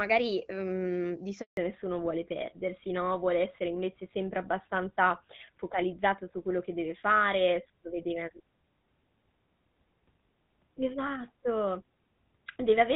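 A phone call in speech, recorded first over the wideband HD Voice path, whose light AMR-WB coding sounds consistent with a rate around 12.65 kbit/s, suffers a handover gap right after "mhmm di". From 1.41 to 1.57 s, 160 ms, the voice fades out within a few tens of milliseconds and stays silent while the call moves between networks and no speech frames arrive. Ordinary packet loss differs: it leaves short, scattered holes or smeared, concealed fragments. Here there is one clean silence that ends exactly where the sound changes character. From 1.57 s to the end comes a fallback to narrowband. Nothing above 4 kHz remains, so the voice turns duller and rougher, which points to the older GSM full-rate codec taking over. A simple low-pass filter would only muffle the voice. This switch happens abruptly at the handover and adds codec roughness as well as the lost treble.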